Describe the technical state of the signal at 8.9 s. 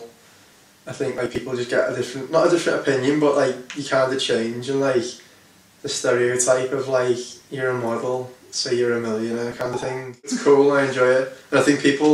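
At 8.9 s the signal is intact, with no audible fault at that moment.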